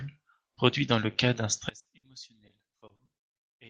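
At 1.69 s the speech suddenly drops by about 28 dB and stays down to the end. What remains is faint. The likely cause is one channel inverted. With one stereo side in reversed polarity, the shared content cancels when the two sides are summed to mono. Only the small difference between them survives.

Two bursts of packet loss follow, at 1.79 to 1.87 s and at 1.97 to 2.05 s. In each, a run of audio never arrived in time. The receiver stretched the last sound for about 60 ms, fading it as it went. The speech then jumps ahead, with about 60 ms of it simply gone.

From 2.47 to 3.09 s there is repeated packet loss, heard as robotic sound. Six separate holes fall in this stretch, none longer than 40 ms. Each is patched by continuing the last sound, and the next hole comes soon after. Together about 160 ms is filled in, roughly a quarter of the span, and the same amount is missing. The voice turns choppy. 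Around all of this, the Opus call codec still carries audio up to about 12 kHz.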